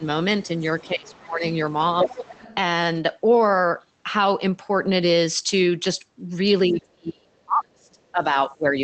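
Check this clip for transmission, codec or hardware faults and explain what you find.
Yes, there are faults: two stretches where the speech is pushed down, one stretch where a second voice bleeds in, and two short patches rebuilt after packet loss. The audio travels over an Opus call path at 24 kbps with content up to 8 kHz.

Speech suppressed in double talk occurs from 2.03 to 2.12 s and again from 6.67 to 8.77 s. In the first, the level falls by about 10 dB for roughly 100 ms, a brief dip. The second is much heavier: the speech drops by as much as about 35 dB, and around 1.5 s of that span is affected. The likely cause is an echo canceller attenuating everything while both ends talked at once.

The other side's voice leaking through is audible from 2.1 to 2.55 s, overlapping the tail of the first dip. A second voice sits underneath at about 15 dB below the main speech. This is likely far-end audio from the talker's loudspeaker that the echo canceller failed to subtract from the microphone signal. 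It fits the double-talk moment just before, where the canceller was already struggling to separate the two sources.

A lost packet rebuilt from error correction appears twice. From 2.93 to 3.03 s about 60 ms was reconstructed, which points to three separate 20 ms packets, and at 4.85 s a single 20 ms frame was replaced. No gap is heard because the decoder used the low-bitrate copies carried in the following packets. Those frames come out rougher and grainier than the surrounding speech for their brief duration.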